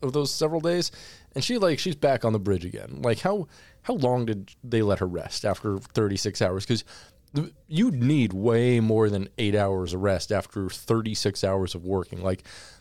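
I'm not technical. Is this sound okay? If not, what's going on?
Yes, nothing in this recording points to a technical problem. There is no moment in it that needs explaining or fixing.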